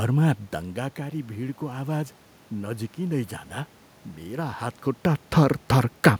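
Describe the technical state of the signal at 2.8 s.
At 2.8 s the signal is inside a stretch of automatic gain rising that runs from 0.75 to 3.39 s. The input had dropped by about 13 dB, so the gain control steadily lifts its gain by about 5 dB over those two and a half seconds. The voice and the room noise swell together. On the waveform the envelope, including the quiet gaps, widens gradually, and a spectrogram shows the noise floor brightening across all frequencies along with the speech.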